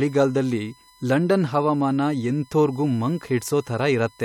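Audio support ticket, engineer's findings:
Steady, fixed-pitch whine at 1 kHz under the speech for the whole clip, roughly 30 dB below it. USB whine: 1 ms bus frame current leaking into power or ground of the audio path. Check interface grounding and power.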